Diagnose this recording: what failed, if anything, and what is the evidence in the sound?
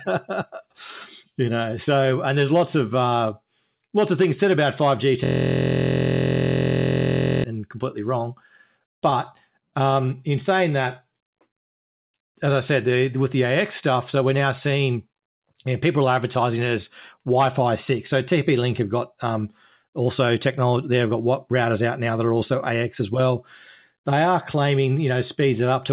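From 5.24 s to 7.44 s the sound collapses into a rough 43.1 Hz buzz before resuming at "and completely wrong". This is a system hang loop at the driver or buffer stage. The host stalled while the audio hardware kept replaying its ring buffer, so one 23.22 ms segment repeats exactly, 95 times. That fits a 1024-sample buffer. Unlike packet-loss concealment, which fades or varies, the repetition is identical every cycle, giving a steady tone rather than a stutter.

Between 10.01 s and 12.98 s the speech drags to about 95 % of normal speed, with sounds stretched but pitch unchanged. This is jitter buffer slow-down in the call-processing stage. The receiver, short of buffered audio, repeated single pitch periods and pause fragments to build reserve, adding 155 ms in total. A resampling or clock-drift slow-down would lower the pitch along with the tempo. Here only the timing stretches, which points to time-scale modification at the receiver.

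After "stuff so we're now", from 14.96 s to 16.52 s, the speech rushes to about 107 % speed until "it as", again at the original pitch. This is jitter buffer speed-up. The receiver found itself holding too much audio, likely after a burst of late packets, and trimmed pitch-period-sized pieces to shed about a tenth of a second of delay. Sped-up playback from a rate mismatch would raise the pitch, but here the pitch stays put. The band limit at 4 kHz throughout comes from the G.711 mu-law call codec.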